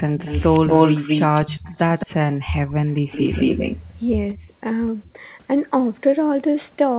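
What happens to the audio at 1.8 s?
A delayed second copy of the speech runs under the original, trailing it by about 216 ms at roughly the same loudness, from 0.18 s to 2.07 s. This is echo leak, likely from a loudspeaker at the far end whose echo canceller let its own playback return down the call.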